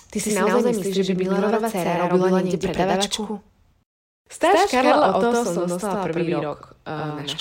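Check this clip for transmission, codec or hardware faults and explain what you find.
There is one fault, a doubled audio track, present through the whole clip. A second full-band copy of the speech trails the original by about a tenth of a second at roughly equal level, most likely captured again through a slower path. Unlike room echo or reverb, it has no decay or tonal colouring, only one clean repeat.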